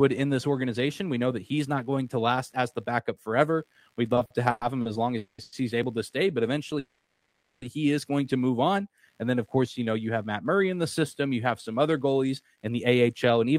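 A faint computer activity noise runs under the whole recording: a buzzy pulsing at roughly 70 Hz, around 45 dB below the speech. It comes from processor, graphics or mouse load modulating the audio circuit's shared ground, so it follows the machine's activity, not the speech.

From 4.15 to 4.87 s, just before "as long", there are repeated stalls (stutter). Four short holds, the longest 110 ms, add 220 ms in total, about 31% of that stretch. Packets kept arriving late, the jitter buffer repeatedly ran dry, and the receiver extended the last sound each time. The speech drags and stumbles, but nothing is lost.

Call audio freezes follow at 5.17 to 5.40 s and 5.42 to 5.54 s, lasting 210 ms and 100 ms. In each the last sound is held as a fading buzz before the speech resumes where it stopped. The cause is likely packets held up in transit emptying the jitter buffer. The delay grows by the length of each freeze.

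At 5.83 s there is a dropped buffer (overrun). A few milliseconds of audio are skipped and the two sides are joined directly, with no silence. This likely happened because the program did not collect the samples before the hardware overwrote them.

A longer call audio freeze runs from 6.79 to 7.64 s, ending just before "he is going to". The held sound fades for 830 ms, briefly reaching silence for about 10 ms, before the speech continues intact but 830 ms later.

From 12.30 s to the end, after "you have some other", a jitter buffer speed-up plays the speech at about 109% speed with unchanged pitch. The receiver trimmed roughly 150 ms of pitch-period pieces to drain excess buffered audio, so the delivery sounds hurried.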